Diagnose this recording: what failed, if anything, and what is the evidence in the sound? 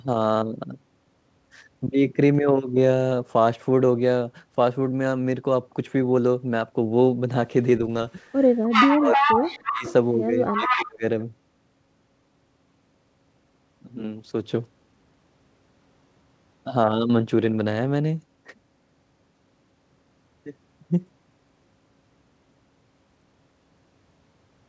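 Call processing: echo leak, likely a far-end echo canceller missing loudspeaker pickup, returns a copy 0.31 s late at near speech level, 8.64 to 9.93 s and 10.47 to 10.84 s.

Speech suppressed in double talk, likely the same canceller ducking both sides, dips the speech about 20 dB at 8.88 to 9.24 and 9.46 to 9.86 s, and about 30 dB at 10.49 to 11.03 s.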